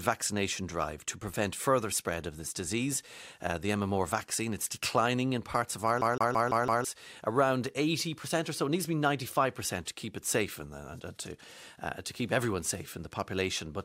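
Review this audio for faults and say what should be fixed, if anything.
From 6.01 to 6.85 s the speech breaks into a rapid, even stutter: the same 0.17 s fragment plays five times in a row, with a brief mute at each jump, before the audio moves on. This is a CD stuck on one turn. A scratch makes the laser lose tracking and fall back one track at the same point on each rotation, so the pickup rereads that short stretch repeatedly. Re-rip from a clean or resurfaced disc with an error-correcting ripper that verifies reads.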